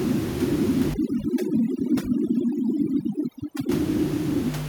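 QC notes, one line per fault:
0.94–3.69 s, overdone noise removal: the background drops away, flecked with twinkling specks. A noise reduction stage set too strong is switching individual frequency bands down or off near its noise estimate, taking quiet speech detail with them; the room noise, about 16 dB below the speech, is what it was chasing.
1.78–2.09 s and 3.01–3.05 s, echo leak: a delayed copy of the speech trails the original by 464 ms, about 10 dB down in the first stretch and only a faint scrap about 40 dB down in the second. This is likely a far-end loudspeaker echo that the echo canceller failed to fully remove before sending it back.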